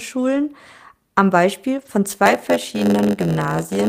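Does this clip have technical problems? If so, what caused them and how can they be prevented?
Yes. Around 0.35–0.41 s and 1.77–1.87 s the speech turns briefly rough and noisy without dropping out: a lost packet rebuilt from error correction. Lengths of 40 and 60 ms suggest two and three lost packets, replaced by low-bitrate redundant copies. Reducing packet loss on the network path prevents this.

From 2.25 s to the end, a buzz near 92 Hz appears and speech runs slower (0.919×) with its timbre unchanged: a block size mismatch (padded). Each block is zero-filled to the reader's larger size. Matching block sizes between stages prevents this.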